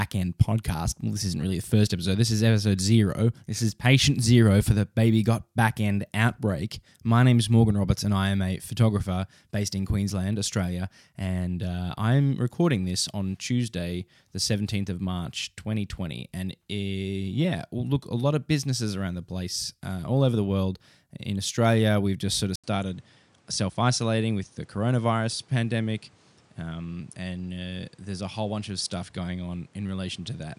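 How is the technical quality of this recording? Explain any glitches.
One fault affects quality. From 22.56 s, after "we've just sort of", an 80 ms gap precedes duller sound with nothing above 10.5 kHz and new noise around 35 dB down, likely an input switched to a poorer device.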